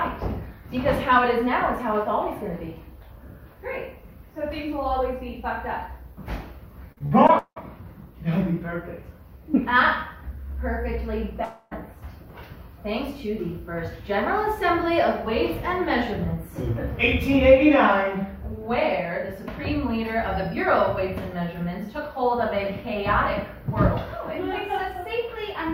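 From 6.92 to 7.58 s there's a run of repeated packet loss, and it gives that choppy, robotic texture. The receiver keeps hitting several short holes in a row and patches each one by stretching out whatever sound it last had, so nearly half of that stretch is concealment rather than real audio. The longest hole is about 0.18 s, and roughly 0.3 s of actual content is missing across the span.

At 11.44 s the sound suddenly smears into a buzzy continuation of itself that fades away over a bit more than a quarter of a second. There's a brief moment of near-silence, and then the audio picks up again at 11.73 s with about 0.28 s simply gone. That pattern is most likely a long network dropout, where nothing arrived and the receiver papered over the gap before giving up.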